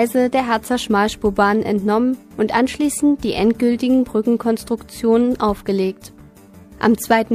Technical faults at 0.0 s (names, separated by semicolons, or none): none